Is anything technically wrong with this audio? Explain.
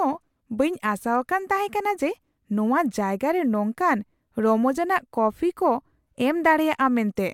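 No, nothing technically wrong can be heard here.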